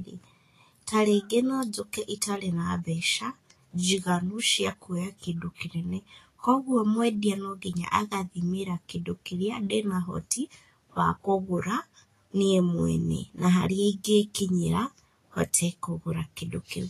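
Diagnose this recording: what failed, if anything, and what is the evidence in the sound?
The speech carries plainly audible grainy hiss and roughened treble throughout, with nothing above 14.2 kHz. This points to the codec stage, likely Vorbis encoding at a low rate, which fits a bitrate around 33 kbps. At that quality the encoder keeps only a coarse spectral floor and quantises the high residue so heavily that fine detail turns into noise of similar energy. That is why sibilance sounds sandy and attacks lose crispness.

From 5.55 to 5.58 s, a short hiss of about 37 ms rises just before a sharp onset, and the attack itself sounds softened and smeared. This is pre-echo, also from the codec stage. The transform spreads quantisation noise evenly across its block. The onset lands late in the block, so noise sized for the loud part fills the quiet stretch before it. It surfaces as a short hissy lead-in ahead of the transient.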